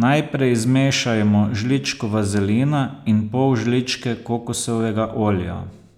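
From 0.10 s to 5.93 s the speech carries clock slip clicks: faint regular ticks roughly every tenth of a second, some fifty in all. Each is a single sample dropped or repeated, likely from two unsynchronised clocks differing by around 200 ppm.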